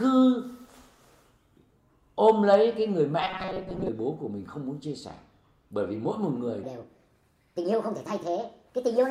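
From 3.22 to 3.88 s the sound turns into a rigid, metallic buzz locked at 188 Hz, keeping only a rough outline of the original. This is robotic sound from repeated short buffers, likely caused by audio arriving too seldom, so a 5.3 ms slice was looped to fill most of that stretch.

From 6.64 s to the end at 9.10 s, the sound becomes high and hurried, raised by about five semitones. This section at the wrong speed runs 1.35 times too fast, likely from playback against a mismatched clock, shifting pitch and tempo together.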